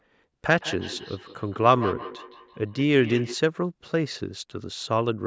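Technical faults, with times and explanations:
0.59 to 3.39 s, feedback echo between two devices: the speech comes back at a steady interval of roughly 150 ms, each repeat thinner and more ringing, peaking at about 12 dB below the direct speech. A second device in the same room is playing this call out loud, and this microphone picks that playback up again. The local echo canceller only removes what its own device plays, so the other device's output survives and circulates back.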